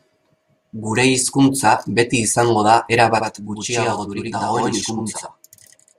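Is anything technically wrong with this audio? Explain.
Yes. From 3.18 s, just after "hizkuntza beti izango da", to the end there is a channel delay (doubling). One channel runs 85.3 ms late, which fits a 4096-sample buffer. Summed to mono, the late copy arrives as a distinct equal-level slap echo behind the speech.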